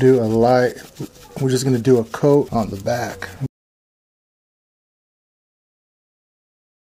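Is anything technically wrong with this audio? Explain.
Yes. An audio dropout to silence at 3.47 s runs to the end. The input was likely lost, leaving silence with no room tone, unlike a noise gate's gentle closing.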